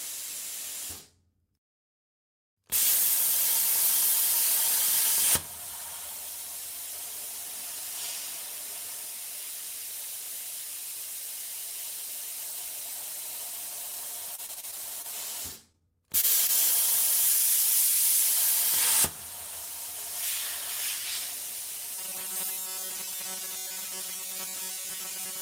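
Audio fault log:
14.35–15.06 s, repeated packet loss (robotic sound): six separate holes in quick succession, the longest about 29 ms, each papered over by stretching the last bit of sound. Around a fifth of the stretch is patched, so it comes out choppy with pieces missing.
15.72–15.75 s, 16.21–16.25 s and 16.47–16.50 s, short concealed packet loss: three quick dropouts, each about 20 ms of real audio lost. The receiver extends what came just before and blends back in, so you hear a brief smear or wobble rather than an actual gap.
21.95 s to the end, robotic sound from repeated short buffers: the audio locks into a stiff, metallic buzz around 188 Hz. That's likely a tiny chunk of roughly 5 ms being looped while fresh audio lags, which covers most of this stretch and replaces the real sound.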